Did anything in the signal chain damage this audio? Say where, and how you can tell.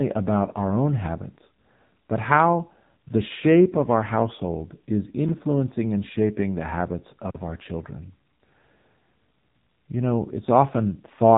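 Yes. For the whole length, the speech sounds buzzy and synthetic, as if rebuilt rather than recorded, and nothing reaches above about 3.8 kHz, so sibilants and breath lose their edge. That is heavy damage from the AMR narrowband mobile codec, at the codec stage. AMR-NB samples at 8 kHz and resynthesises the voice from a vocal-tract model and a few pulses in each 5 ms. The coarseness points to a low mode near 6.7 kbps.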